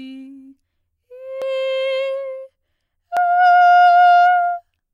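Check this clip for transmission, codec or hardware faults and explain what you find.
The music jumps forward twice, at 1.42 s and 3.17 s. This is likely audio missing between chunks: processing in 2-second blocks drops about a third of a second at each handover and splices the edges together. Each joint sounds like an abrupt skip. On a waveform or spectrogram, it appears as a sudden discontinuity with no silent gap.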